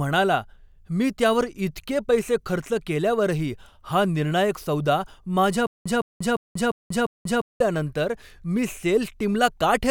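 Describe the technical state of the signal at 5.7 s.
At 5.7 s a stutter with silent gaps begins, running to 7.60 s: a 162 ms fragment repeats five times, each followed by 187 ms of digital silence, likely from a stalled stream.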